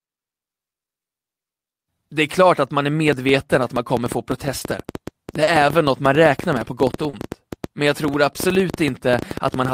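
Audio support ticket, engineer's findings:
Train of clicks from 3.08 s to end, just after "klart att man är": irregular ticking about 9 per second, peaks roughly 10 dB above the speech, audible in pauses too. Likely interference pickup or a faulty connection injecting repeated similar pulses.

Short concealed packet loss at 4.59 s, 5.43 s and 7.09 s: brief smears or wobbles, consonants possibly lost. Packets missing 20 ms, then 40 ms, 40 ms. Decoder concealment extended the prior waveform or shaped noise, then crossfaded back.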